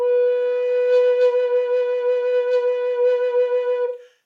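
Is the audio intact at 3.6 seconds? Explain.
Yes, the music plays through 3.6 seconds intact, with no dropout, click or other fault at that moment.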